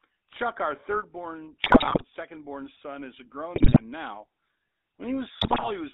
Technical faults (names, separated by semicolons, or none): GSM full-rate codec; GSM bit errors